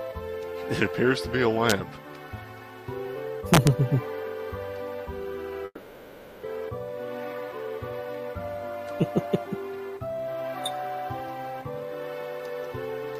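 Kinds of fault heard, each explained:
Integer overflow: a gain sum wrapped past its largest integer instead of limiting. Peaks only about 1 to 2 dB over flip sign, cracking at 1.70 s and 3.54–3.67 s.
Long network dropout: audio likely stopped arriving, so 5.65–6.46 s is the last sound stretched into a fading buzz or hiss, then brief silence. Sound resumes with that section missing.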